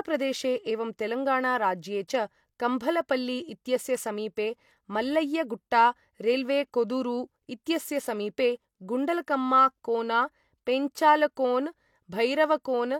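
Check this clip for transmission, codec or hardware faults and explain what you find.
One codec fault is audible. At 2.07 s there is pre-echo: a transform block spread quantisation noise meant for a sharp speech onset back across the quiet 10 ms before it, so a brief hiss leads the attack and blurs it. A spectrogram shows a broadband smear just ahead of the onset.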